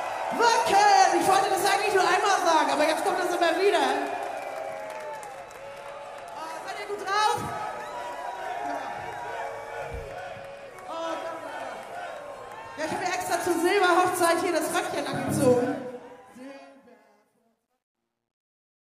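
Truncation distortion on a fade runs from 15.64 s to the end at 18.81 s. As the fade-out starting around 15.6 s drops toward the smallest step, an undithered stage, consistent with roughly 12 bits, squares the waveform, and from 16.88 s it turns gritty.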